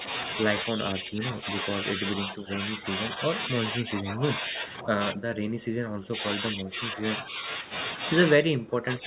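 A speech recording carried over a narrowband call path, with nothing above 4 kHz, which fits G.711 mu-law, shows speech suppressed in double talk at 0.65–1.45 s, 1.96–3.18 s, 3.49–7.4 s and 8.37 s to the end. The voice dips by roughly 10, 5, 15 and 25 dB. The longest stretch, from 3.49 s, is held down for around three seconds in total. The likely cause is an echo canceller that, with both sides talking at once, attenuated the near talker along with the loudspeaker echo. On a waveform the envelope visibly sags in these spans, and a spectrogram shows the speech energy fading there, most deeply near the end.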